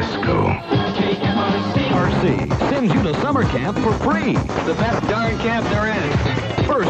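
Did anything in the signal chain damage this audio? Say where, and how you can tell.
No, nothing in the signal chain damaged this audio.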